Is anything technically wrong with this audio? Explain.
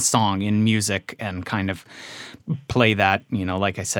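Yes. From 2.7 s onward, the resampler restarted on every block, missing neighbouring samples at each 100 ms edge. This gives 10 Hz ticks, shown as regularly spaced vertical spectrogram lines.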